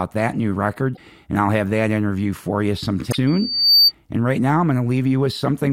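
A speech recording with two kinds of fault. Damaged data in a compressed stream causes brief glitches at 0.93–0.99 s, between "that new" and "and I'll have that", and at 3.10–3.15 s, after "that interview for you". The decoder misreads the broken frames and resyncs at the next header. From 3.27 to 3.92 s, a loudspeaker feedback squeal builds at 4.6 kHz over about half a second to roughly 10 dB above the speech. The mic is re-amplifying the speaker's output, which appears as a rising horizontal line on a spectrogram and a swelling envelope in the waveform.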